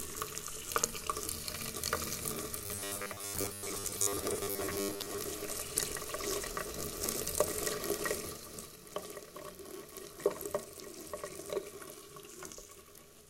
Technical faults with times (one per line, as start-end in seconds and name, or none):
2.66-5.19 robotic sound from repeated short buffers